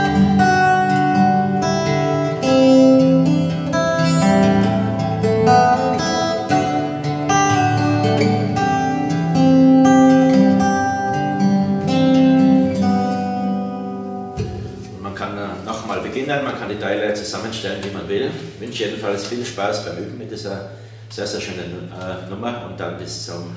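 No technical faults can be heard anywhere in the audio.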